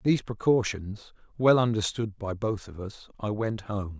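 Listening to the speech carefully, nothing technical stood out.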